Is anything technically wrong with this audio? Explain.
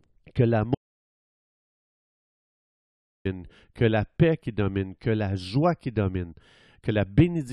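Yes, there's an audio dropout to silence from 0.75 to 3.25 s in this speech. About 2.5 s falls to silence, with no room tone at all, then picks back up mid-flow at "que la paix qui". Likely the input got lost and the recorder kept writing silence.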